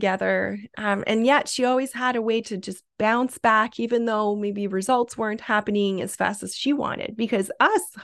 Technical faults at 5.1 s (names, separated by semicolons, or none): none